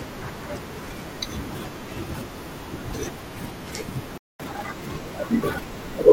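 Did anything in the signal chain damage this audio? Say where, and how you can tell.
Yes, at the playback stage, there is a playback stall. The speech cuts out at 4.18 s and stays silent until 4.40 s, a gap of about 0.22 s. On the waveform this shows as a flat, silent stretch dropped into the middle of the speech envelope. On a spectrogram it appears as a clean vertical blank band where every frequency disappears at once. The likely cause is the player running out of buffered data, or its audio thread being blocked, until it recovered.

Straight after the gap, from 4.40 s to 6.03 s, there is catch-up at higher speed. The player works through its backlog by resampling at 1.1 times normal rate, so the speech runs faster and its pitch rises by about one and a half semitones before dropping back to normal. On a spectrogram the harmonic lines shift upward across that span and the syllables compress horizontally. 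On the waveform the syllable peaks sit closer together until normal playback resumes.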